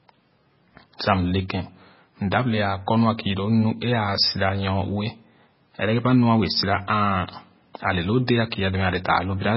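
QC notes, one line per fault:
throughout, MP3 compression: watery, swirly speech with smeared attacks and nothing above 5.5 kHz, likely heavy MP3 coding starved of bits, consistent with roughly 16 kbps.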